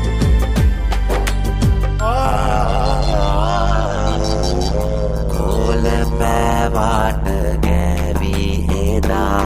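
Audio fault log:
2.25–9.45 s overlap-add ripple: windowed frames were rejoined with an overlap whose gain isn't constant, so level swings about 60 dB around 100 times a second, a harsh metallic buzz.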